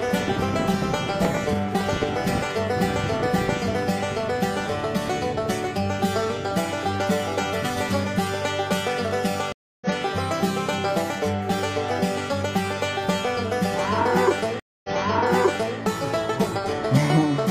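At 9.52 s a stream reconnect drops the audio for 289 ms, and playback resumes roughly a fifth of a second further on, skipping material. At 14.60 s a second reconnect gives 242 ms of silence, then restarts 929 ms earlier, repeating nearly a second of audio.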